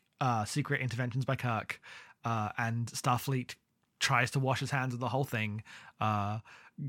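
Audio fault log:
throughout, sample clock jitter: the converter's clock wanders by roughly a microsecond or two, so each sample lands slightly off time and steep parts of the waveform pick up errors. This speech carries a faint hiss and roughness, far below the signal, that grows on loud, bright syllables and disappears in pauses.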